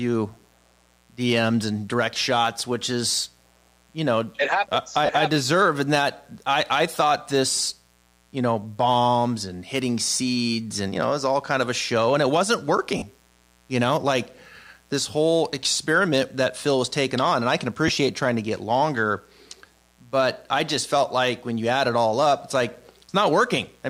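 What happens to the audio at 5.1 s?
Just after "know it happens I", from 5.06 to 5.09 s, lost LE Audio frames leave a gap of about 30 ms. That fits three 10 ms frames going missing. The LC3 decoder fills the hole by repeating the last spectrum with random signs. So the speech briefly turns into a noisy smear.

A mains buzz also runs under this moment, as it does through the whole clip. It sits on a 60 Hz base, about 35 dB below the speech. Switching spikes twice per mains cycle add harmonics, giving a steady, raspy buzz.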